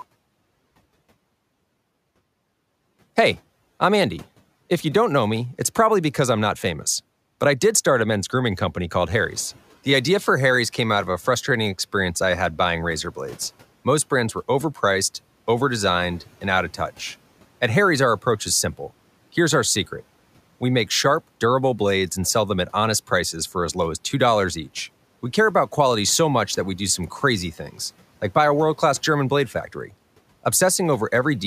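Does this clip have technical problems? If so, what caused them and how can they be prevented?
Yes. Just after "men's grooming company called", the room noise jumps by about 10 dB around 9 s, and from 9.1 to 9.6 s the noise suppressor is catching up: the louder noise passes through with less reduction at first, then sinks by about 7 dB over half a second as the noise estimate adapts. Unlike gate pumping, it is a single smooth settling after one step in the background, not a level that rises and falls with each phrase. Using a suppressor whose noise estimate tracks sudden changes faster, or keeping loud noise sources from starting near the microphone, would prevent it.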